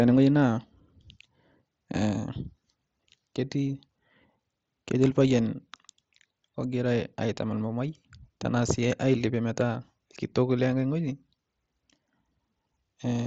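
No faults heard; the speech carries the normal signature of a Bluetooth mSBC headset codec, with content stopping at 8 kHz and a light grain on the louder passages.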